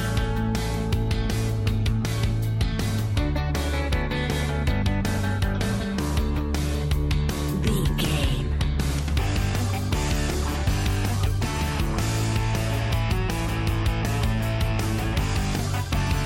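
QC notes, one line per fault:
Nothing to flag here; I listened all the way through and didn't hear a single fault.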